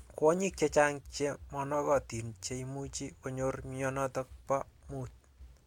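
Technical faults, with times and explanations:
No technical faults are audible anywhere in this speech recording.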